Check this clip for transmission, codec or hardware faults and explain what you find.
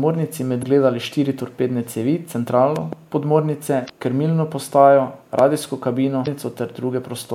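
Two kinds of fault are present: damaged data in the compressed stream, three times, and loud pops, at two moments.

Damaged data in a compressed stream occurs at 0.59–0.64 s (just before "štiri torpedne"), 3.86–3.90 s and 6.23–6.28 s. Corrupted bytes make the decoder misread frames and lose sync until it finds the next valid header. Each spot is a brief chirp or blip in the speech.

Loud pops occur at 2.76–2.95 s, as two pops just before "podmornice krmilno", and at 5.39–5.41 s, as a single pop. They are likely voltage spikes from a connector, switch or static discharge, added to the signal. Each is a sharp pop peaking about 10 dB above the speech, which continues underneath.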